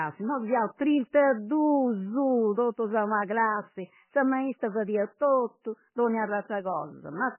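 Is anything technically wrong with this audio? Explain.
Yes. Throughout the speech there is heavy MP3 compression damage, likely from a very low bitrate around 10 kbps. Starved of bits, the encoder cuts everything above 3 kHz and drops weak frequency lines frame by frame, so the sound turns watery and swirly with smeared attacks. A spectrogram shows a hard ceiling at 3 kHz and patchy, flickering blocks below it.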